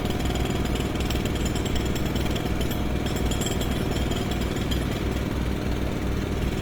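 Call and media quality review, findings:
Opus compression, whole clip, 0 to 6.6 s: grainy, rough, noisy texture on tonal content, plainly audible. Likely cause is the Opus encoder in CELT music mode, which fills starved bands with folded or noise energy, consistent with roughly 24 kbps. Distinct from MP3, which swirls through spectral holes, and from SILK speech mode, which muffles: here the bandwidth stays full, with content reaching about 20.2 kHz.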